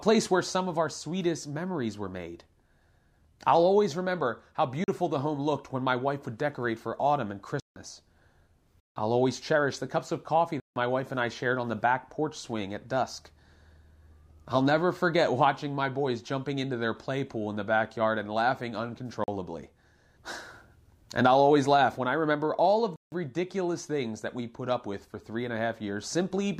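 Blocks of digital silence cut into the speech six times: 4.84 to 4.88 s, 7.60 to 7.76 s after "decorate for autumn and", 8.80 to 8.96 s, 10.60 to 10.76 s between "the cups of coffee" and "my wife and I", 19.24 to 19.28 s, and 22.96 to 23.12 s after "I remember all of". Each time the sound drops abruptly to silence and returns with no fade. The 40 ms gaps sound like brief holes, and the 160 ms gaps like short holes.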